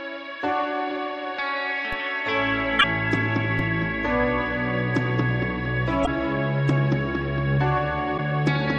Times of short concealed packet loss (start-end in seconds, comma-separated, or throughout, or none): none